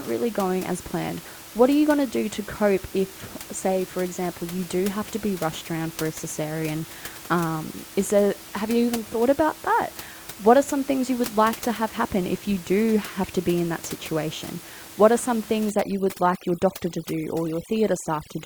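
From 15.7 s to the end at 18.45 s, overdone noise removal sets in. The over-aggressive reducer strips quiet bands near the room noise, about 17 dB down, leaving a twinkling near-silence.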